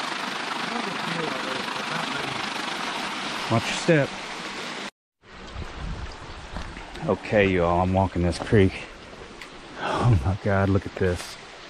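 A fast, rough flutter runs through the audio from 0.00 to 2.79 s, pulsing around 30 times a second by about 6 dB. This is overlap-add ripple: frames were rejoined with overlaps that don't sum evenly.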